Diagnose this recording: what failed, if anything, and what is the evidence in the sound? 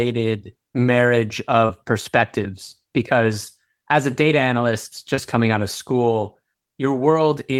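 Brief smeared wobbles in the speech at 1.65–1.71 s and 5.15–5.19 s: short concealed packet loss on the network, where the decoder bridged roughly 40 ms and 20 ms gaps.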